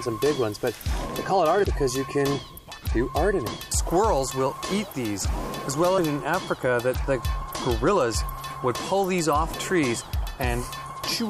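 Damaged data in a compressed stream causes short blips at 1.63, 3.46, 5.97 and 9.52 s, each under 20 ms. Corrupted bytes make the decoder misread frames and lose sync until it finds the next valid frame header.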